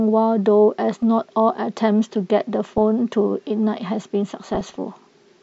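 DAB burbling appears three times in the speech: 0.92 to 1.03 s, 2.65 to 2.81 s, and 4.37 to 4.76 s, each burst longer than the last. Bit errors at a fraction of a percent slip past error correction into the MP2 stream. Corrupted samples put short blips of noise into individual sub-bands, and corrupted scale factors throw sub-bands up or down in level for up to a frame, giving burbling blips laid over the speech, densest in the final burst.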